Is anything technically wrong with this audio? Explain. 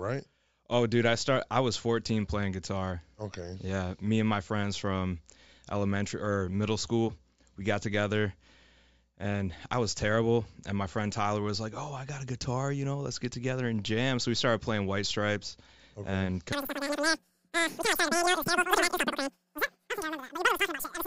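Yes. From 16.5 s, right after "okay and", to the end at 21.1 s, the speech has a wrong sample rate. Audio recorded at 16 kHz plays at 48 kHz without conversion. Everything runs three times too fast. Pitch rises about 19 semitones, giving a squeaky, rushed chatter.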